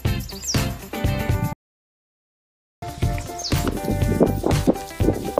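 At 1.53 s the sound cuts out in mid-flow and stays silent until 2.82 s, a gap of about 1.29 s, before carrying on again. That's a playback stall. The likely cause is the player running dry of data, or its thread getting blocked, so the output simply had nothing to play until it caught up. It's a sudden dead hole and then a resumption, which makes it easy to spot.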